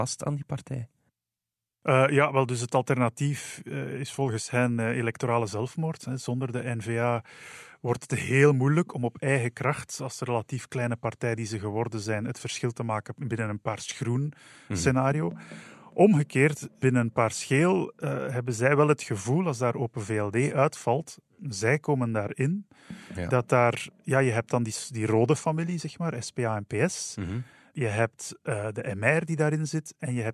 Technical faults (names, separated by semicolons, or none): none